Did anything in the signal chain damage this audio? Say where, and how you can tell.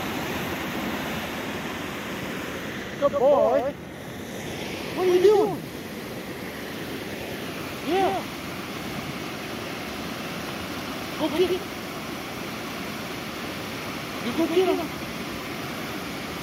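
Yes. A doubled audio track runs throughout: a second full-band copy trails the original by roughly 100 ms at about 5 dB lower, with no decay or room colour. This likely comes from the same signal being captured again through a slower parallel path.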